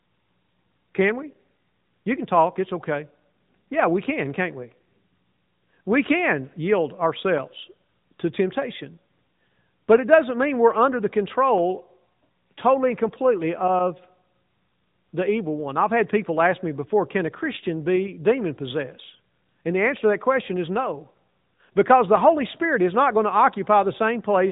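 Throughout the speech, the sound carries the plain marks of the AMR narrowband mobile codec. Nothing reaches above 4 kHz, and the voice has a buzzy, synthetic edge because it is rebuilt from a vocal-tract model driven by a few pulses per 5 ms subframe. The damage is clearly audible, which fits a mid-range mode around 10.2 kbps. That rebuilt, robotic quality is what separates this from a simple low-pass filter, which would dull the voice without making it sound synthesised.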